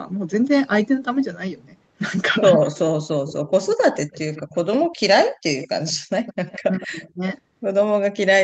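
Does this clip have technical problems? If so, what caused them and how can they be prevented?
Yes. An echo leak is heard from 3.27 to 4.89 s, 5.60 to 5.93 s and 6.26 to 7.09 s: a distinct copy of the speech trailing by 158 ms, about 20 dB down. That fixed delay separates it from diffuse room reverberation. It is likely caused by the far end's echo canceller not fully removing its loudspeaker pickup. Using headsets there, or a better-tuned echo canceller, prevents it.

Speech suppressed in double talk occurs from 6.65 to 7.23 s. The speech dips in pieces by roughly 25 dB while overlapping the echo, unlike packet-loss dropouts, which ignore who is talking. The likely cause is the echo canceller ducking both sides. Full-duplex-capable echo cancellation, or headsets that remove the echo, would prevent this.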